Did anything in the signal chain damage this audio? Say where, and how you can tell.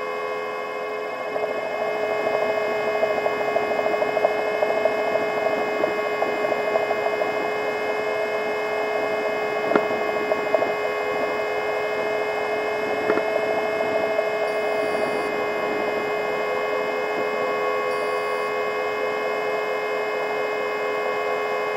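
No, nothing in the chain from capture to playback left any audible damage on this audio.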